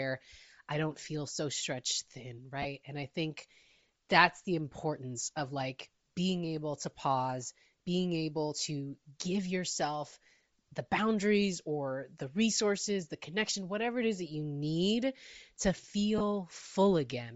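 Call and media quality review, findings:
Bluetooth LC3 compression, whole clip. Speech has a breathy, grainy edge and a noise-filled top band. Likely LC3 at a low rate, fitting 32 kbps with 7.5 ms frames. Upper spectrum zeroed by the encoder, then refilled with noise on decode.

Lost LE Audio frames, 2.62–2.65 s and 16.18–16.21 s (the second just after "that you need to"). Each is a brief noisy smear of 22.5 ms, which fits three dropped 7.5 ms frames. The decoder reuses the last spectrum with random signs, and the gap is too short to fade toward silence.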